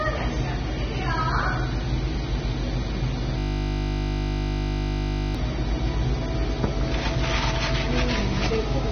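A steady 50 Hz mains hum runs throughout at roughly the level of the sound itself, pointing to a ground loop or nearby transformer coupling the power line into the signal.

Nothing is present above 6.3 kHz, and the remaining sound is dull and smeared with a warbling texture, likely from AAC compression at a low bitrate.

From 3.39 s to 5.35 s a system hang loop repeats one 20 ms piece of audio many times, producing a steady 50 Hz buzz while the hardware cycled through a frozen buffer.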